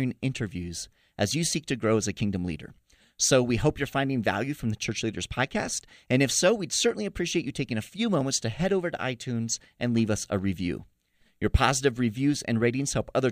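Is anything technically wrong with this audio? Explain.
No, no technical faults.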